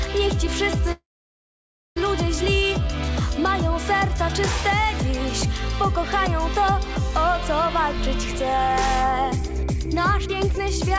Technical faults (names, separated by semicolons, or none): call audio freeze; jitter buffer speed-up